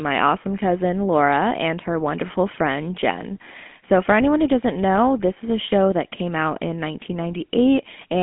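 From start to finish, the speech carries GSM full-rate codec damage: excitation built from regularly spaced pulses at a reduced rate, consistent with roughly 13 kbps, gives a plainly audible buzzy, gravelly roughness, and the band sits between 200 Hz and 3.4 kHz.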